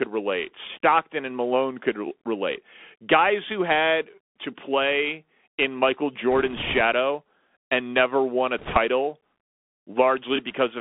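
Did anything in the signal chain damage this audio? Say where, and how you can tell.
Yes. The damage happens at the codec stage. The whole clip has been through a Bluetooth CVSD headset codec, the narrowband one-bit delta coder, which fits a 64 kbit/s headset link. The speech sits in a band of about 250 Hz to 3.5 kHz, with nothing above. The coder's adaptive step can't keep up with loud, bright sounds, so sibilants come out scratchy and a grainy hiss runs under the voice from start to finish.

There are also bit errors on the Bluetooth voice link, heard as two bursts of rushing, crackly noise layered over the speech rather than as sharp clicks. Every CVSD bit carries only a small step, so flipped bits cause brief wobbles that decay instead of loud pops. The first burst runs from 6.32 to 6.81 s and is lighter, fitting an error rate of around one percent. The second, from 8.58 to 8.77 s just after "and never won a", is rougher and fits a higher rate of roughly three percent.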